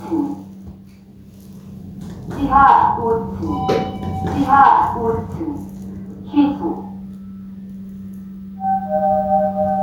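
Right from the start and all the way through, there's gain pumping: the level keeps getting pulled down on each loud sound, swinging by around 5 dB. The likely cause is input gain set far too high, with a fast limiter clamping down on every peak, so everything ends up squashed.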